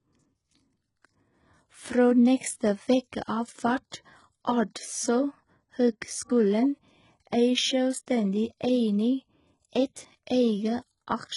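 Across the whole speech clip the treble sounds synthetic and nothing reaches past about 11.1 kHz. It's likely HE-AAC compression at a low bitrate, rebuilding the highs from copied lower bands, so s sounds come out gritty and lispy.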